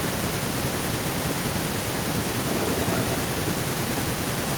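From 2.49 to 3.17 s an echo leak can be heard: a second copy of the speech trails the original by 325 ms, only slightly quieter, about 5 dB down, so it sounds like a distinct, delayed repeat. The likely cause is a far-end loudspeaker whose echo canceller failed to remove what its microphone picked up. On a spectrogram the harmonic bands reappear shifted 325 ms later; the waveform shows overlapping, smeared envelopes.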